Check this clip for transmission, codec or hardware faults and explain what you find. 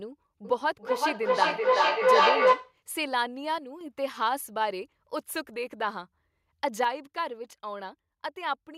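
Two faults are present: a feedback echo between two devices, and two losses of level that point to one channel dropping out.

From 0.45 to 2.81 s, a feedback echo between two devices loops the speech back about every 0.4 s. The repeats build instead of fading, peaking about 8 dB above the speech.

From 3.58 to 3.81 s, and again from 6.84 s to the end, the sound abruptly falls by about 6 dB. One stereo channel dropping out is the likely cause, halving the mono sum.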